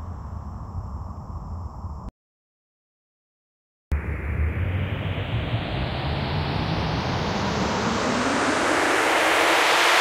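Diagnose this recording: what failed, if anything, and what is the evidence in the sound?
An audio dropout to silence runs from 2.09 s to 3.92 s. The sound cuts off abruptly and returns mid-flow. The 1.83 s gap is silent, with no room tone. The likely cause is a lost input link while the recorder kept writing zeros.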